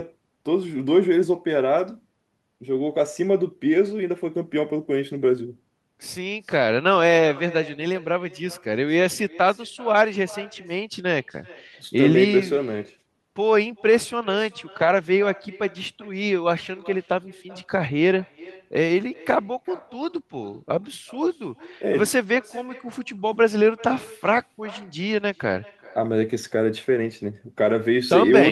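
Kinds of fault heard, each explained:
Echo with no canceller: the far end plays the call through a loudspeaker, its microphone picks it up, and nothing removes it, so the talker's speech returns after the network round trip. Each phrase is trailed, roughly four tenths of a second later, by a thinner copy about 22 dB quieter. A spectrogram shows each syllable's harmonics repeated as a faint ghost offset by that gap. The waveform shows small matching bursts after each louder one, spilling into pauses.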